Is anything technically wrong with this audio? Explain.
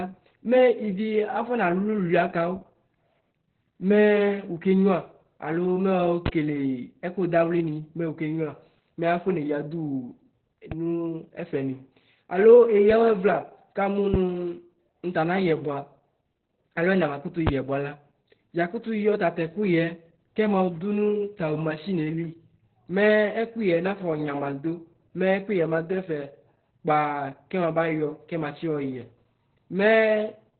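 Yes. Opus voice compression runs throughout: a low rate, consistent with about 8 kbps, narrows SILK coding to narrowband, so nothing sounds above 4.4 kHz, and speech sounds muffled, hoarse and slightly robotic. Loud pops occur at 6.26–6.30 s, 14.14–14.18 s and 17.47–17.51 s. Each is a single sharp crack about 15, 15 and 20 dB above the speech, likely from a voltage spike from a plug, switch or static. A DC step at 10.72 s shifts the waveform's zero line, holding until 12.90 s. Each shift is heard as a low thump while the speech continues unchanged.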